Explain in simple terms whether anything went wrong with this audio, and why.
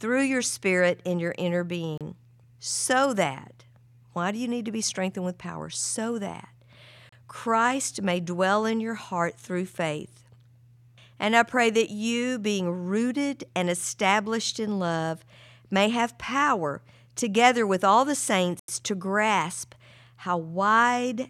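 Bluetooth stalls at 1.98 s, 7.09 s and 18.59 s: the speech cuts to silence for 32 ms, 32 ms and 87 ms. Likely, interference delayed the wireless data, so the headphones ran out of sound and waited for resent pieces before continuing.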